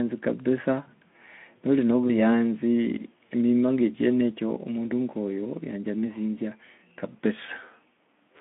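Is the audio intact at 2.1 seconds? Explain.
No. From 2.08 to 2.14 s there is VoIP packet loss concealed by the speech codec: about 20 ms of audio, pointing to one lost frame, was extrapolated into a brief buzzy or noise-like, fading smear that stays weak until 2.14 s, not a clean silent gap.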